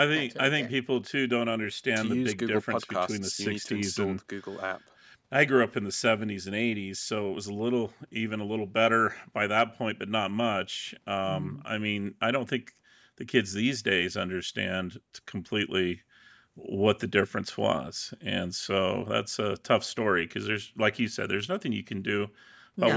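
Listening to this speech recording, nothing stood out as a technical problem, and the lowest bass being trimmed away is simply the normal behaviour of the call's microphone processing.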